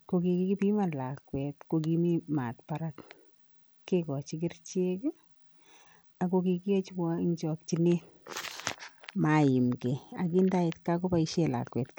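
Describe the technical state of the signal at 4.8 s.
At 4.8 s you're hearing the same damage that runs through the whole clip: Bluetooth SBC compression, likely the cause, at a rate that sounds like it fits something around 96 kbps. The codec splits the speech into a handful of wide bands and hands out too few bits, so the top bands get starved and everything else is coarsely quantised. You get dull, flickering treble with a gritty, aliased edge riding on the speech.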